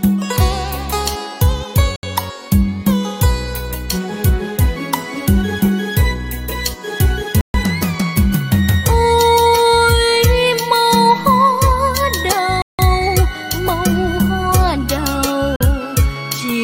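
The audio cuts to dead silence four times: at 1.96 s for 71 ms, 7.41 s for 133 ms, 12.62 s for 169 ms and 15.56 s for 46 ms, then resumes. These are likely Bluetooth stalls, where the headphone buffer ran dry. Unlike an edit cut, the sound carries on after each gap.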